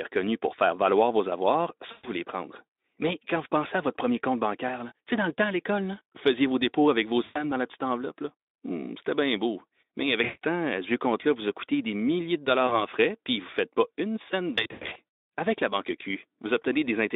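Buzzy, smeared dropouts break the speech at 1.91–2.09 s, 7.23–7.44 s, 10.23–10.45 s and 12.67–12.82 s, and again, scattered across 14.55–14.97 s, with the longest single gap about 100 ms. Each one stretches the last sound into a fading tone or coloured hiss, and the voice stays weak for a moment afterwards. This is VoIP packet loss concealed by the speech codec. Over narrowband Speex, the decoder extrapolated pitch and filter through 40–220 ms of missing audio.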